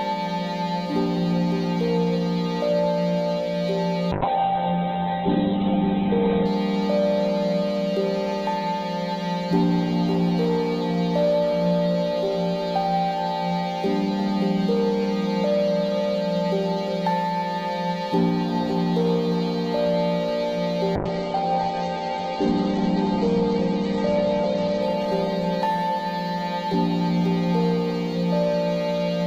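From 4.13 to 6.53 s the audio turns rough and muffled, with everything above 4 kHz gone, and from 20.96 to 27.13 s it goes watery again with a cut-off at 8 kHz. Each time it holds at its worst for about 2.3 s and then 3.6 s. This is a call bitrate drop: the bandwidth estimate fell and the encoder coded more coarsely and narrowed its band, which fits a fall from about 64 kbps to 8 and 10 kbps.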